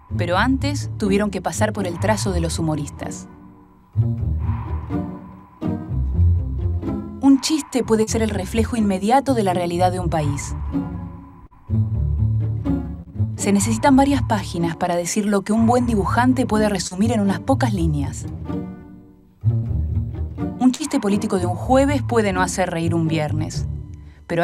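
Short concealed packet loss appears four times, at 8.03 to 8.10 s, 11.47 to 11.53 s, 13.02 to 13.13 s and 16.87 to 16.94 s. Each time about 40 ms of audio failed to arrive and the receiver bridged the hole by extending the preceding sound before blending back. The result is a brief smear or wobble rather than a dropout. At 13.02 s the patch also stretched the timing by roughly 15 ms, so the sound there lags slightly.

A burst of packet loss follows at 19.55 to 19.66 s, where about 80 ms went missing, and again at 20.75 to 20.82 s, with about 40 ms lost. Instead of a quick smear, the concealment holds the last sound for longer and fades it as the gap continues, leaving a sustained buzz or dying hiss. Playback then resumes further along with the intervening audio gone, which separates these from the briefer patches earlier.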